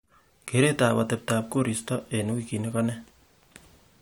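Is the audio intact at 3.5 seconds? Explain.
Yes, the speech at 3.5 seconds comes through intact, with no dropout, click, distortion or other fault at that moment.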